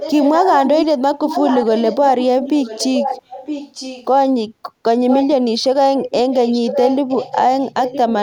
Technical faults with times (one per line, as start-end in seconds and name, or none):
0.00-0.86 echo leak
1.15-4.06 echo leak
5.09-5.26 echo leak
6.00-8.14 echo leak